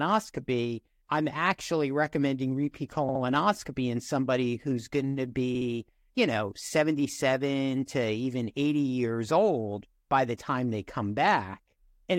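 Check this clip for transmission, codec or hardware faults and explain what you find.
The clip has one fault type, repeated frames, occurring twice in the speech: at 3.09 to 3.22 s and at 5.55 to 5.68 s. In each, a run of compressed data was delivered more than once, so the decoder replayed the same 64 ms stretch twice more, adding 128 ms each time. This fits a pair of duplicated frames. The result is a brief stutter.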